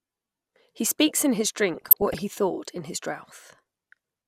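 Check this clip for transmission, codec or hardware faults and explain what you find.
There's one fault in this speech clip: a stretch of DAB burbling from about 1.75 to 2.21 s. Weak reception let bit errors, somewhere under half a percent, slip past the error correction into the MP2 data. Corrupted samples put short blips of noise into single sub-bands, and corrupted scale factors make sub-bands jump in level for up to a frame, which gives that burbling laid over the speech.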